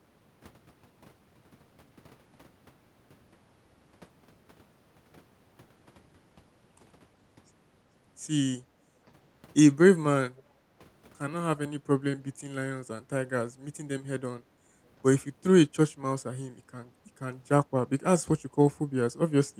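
At 10.37 to 10.43 s a brief echo leak appears: a faint scrap of the speech returns about 0.37 s after the original, far quieter than the live talker, roughly 35 dB down. The likely cause is a far-end loudspeaker whose echo canceller let a fragment of its microphone pickup through and sent it back. On a spectrogram it shows as a faint, short ghost of earlier harmonic patterns; in the waveform it is barely visible.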